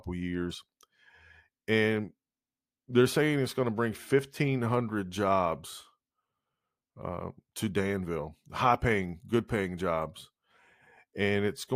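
No technical faults are audible.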